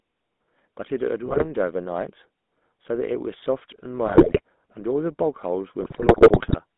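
A speech clip carried over a GSM full-rate codec, which fits the 13 kbps first-generation GSM voice coder. It rebuilds the voice from a vocal-tract filter driven by a coarse pulse excitation, leaving it audibly buzzy and gravelly, with the band held to roughly 200 Hz to 3.6 kHz. GSM bit errors from a weak link corrupt the decoder's filter, pitch and gain values at 1.26 to 1.48 s, 4.06 to 4.41 s and 5.80 to 6.59 s. The voice there breaks into squawks, pops and gargling bursts.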